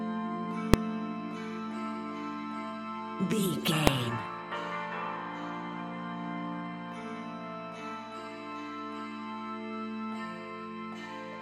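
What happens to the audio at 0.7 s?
At 0.74 s, a calculation produced invalid numbers at full scale, forcing a 1.33 ms block to the largest possible value, which is heard as a single sharp bang. Underneath, mains hum from power-line coupling adds a steady 60 Hz low tone about 25 dB below the signal.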